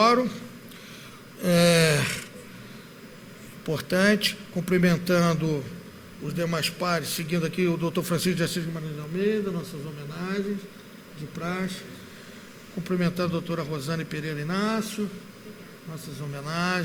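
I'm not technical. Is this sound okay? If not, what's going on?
Yes, this sound is okay; nothing is going on with it that needs fixing.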